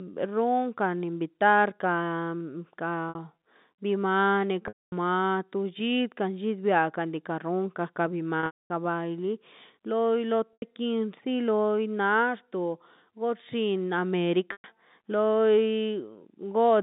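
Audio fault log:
3.09–3.15 s, 4.68–4.92 s, 8.40–8.70 s, 10.53–10.62 s, 14.52–14.64 s, packet loss with pitch repetition: brief buzzy held tones, with the 240 ms and 270 ms gaps dying into silence, as the receiver loops the last pitch cycle over lost audio.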